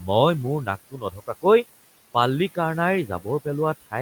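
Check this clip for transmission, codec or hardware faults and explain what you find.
Two processing faults are audible, both from a noise suppressor. Throughout the speech, the background drops away between phrases and swells back beneath them: noise suppressor artifacts, cutting noise-classified bands by about 15 dB. The room noise it acts on sits about 18 dB below the speech.

Between 0.91 and 1.45 s, parts of the speech turn faint and swallowed, about a third of a second in total. This is speech cut by the noise suppressor, which mistook quiet speech for noise and lowered it by up to about 15 dB.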